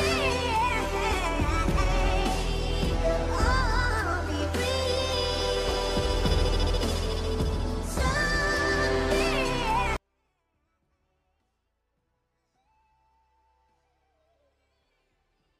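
At 9.97 s the audio suffers a 24-bit alignment error (too quiet): samples held in the low bytes of a 32-bit word are read as full 32-bit values, dropping the level by about 48 dB to the end. The waveform collapses to a near-flat line, and the spectrogram fades almost to black while keeping its shape.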